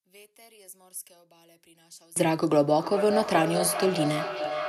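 From 0 to 2.16 s the speech drops by about 29 dB. This is likely one channel inverted, cancelling when summed to mono. From 2.76 s to the end, a feedback howl builds near 700 Hz. Its loop repeats roughly every 400 ms and it peaks about 6 dB below the speech.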